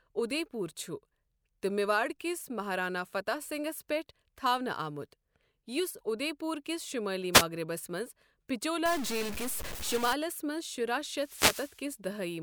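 A brief swish of static from 7.33 to 7.44 s is a wireless microphone noise hit: the FM radio link faded momentarily, letting receiver noise through. From 8.86 to 10.13 s the speech turns harsh and buzzy, with noise filling the gaps, likely a stuck bit in the converter or data path, offsetting about half the samples by a step of roughly -35 dBFS. A longer burst of static from 11.13 to 11.86 s is a second wireless microphone noise hit, where the radio link faded again and let receiver noise through.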